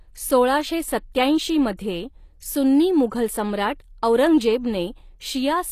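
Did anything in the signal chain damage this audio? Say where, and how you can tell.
Yes, at the codec stage: the damage fits HE-AAC compression at a low bitrate around 24 kbps, likely the cause. Throughout the speech, the treble is rebuilt by spectral band replication rather than coded, so s sounds turn gritty and lispy, and nothing sits above 15 kHz.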